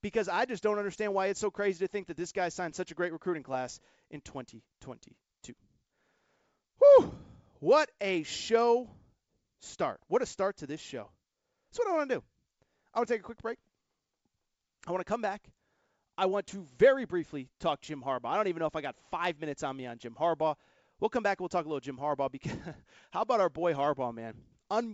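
Nothing goes wrong anywhere in this speech clip; it simply carries the mild, slightly band-limited character of a call, with nothing above 8 kHz, which fits a wideband call codec such as G.722 running at around 64 kbps.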